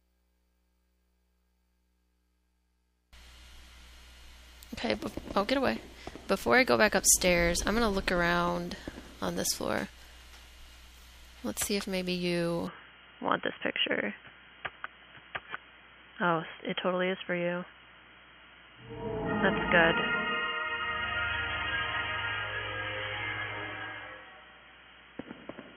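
At 12.67 s the audio abruptly turns dull and boxy and stays that way to the end, with nothing above 3.3 kHz, a faint new background noise well below the signal, and no change in level or gap at the change. This is most likely an input switched to a poorer device. What separates it from a simple low-pass filter or codec bandwidth drop is the arrival of a different noise floor and tonal colour at the same instant.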